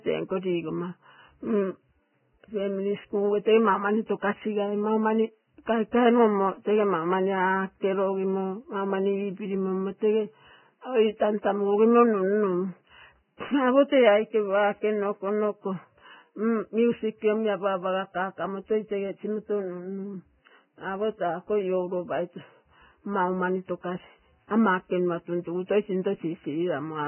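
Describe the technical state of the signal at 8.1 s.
Vorbis compression is the likely cause of what is heard at 8.1 s, and it runs through the whole clip. Nothing reaches above 3 kHz, and the remaining upper band is coarsely quantised into hissy, grainy noise, with rough tones and smeared onsets that fit a very low bitrate near 9 kbps.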